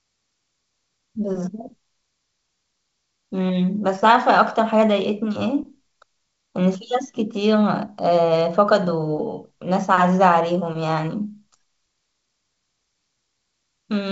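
Speech carried over G.722 wideband telephone coding at 64 kbit/s, with nothing above 7.7 kHz as that path implies, and no technical fault to report.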